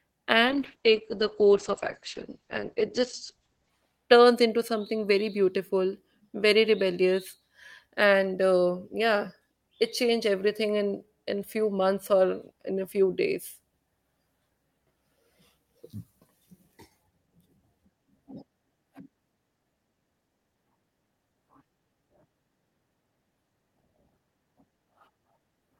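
From 0.46 to 3.77 s, just before "turns into something very", a call bitrate drop, which fits 48 falling to 9 kbps, starves the encoder: speech turns rough and muffled, with highs cut above 8 kHz.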